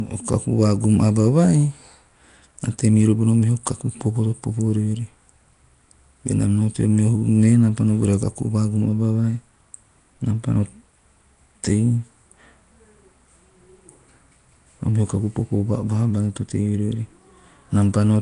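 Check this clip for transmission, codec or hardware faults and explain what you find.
One codec fault runs through the whole clip. Nellymoser compression, throughout: the speech has a rough, hissy halo and smeared, underwater quality, with nothing above 10.6 kHz, likely from Nellymoser Asao filling starved bands with noise, which fits a 44 kbps stream.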